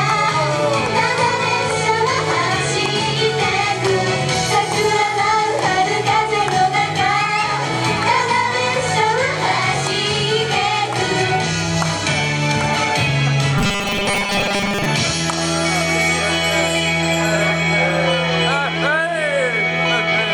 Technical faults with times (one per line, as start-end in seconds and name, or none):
13.58-14.86 robotic sound from repeated short buffers